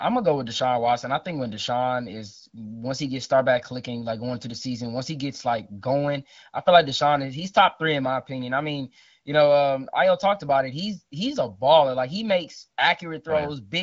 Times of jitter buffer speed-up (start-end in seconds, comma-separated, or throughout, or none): none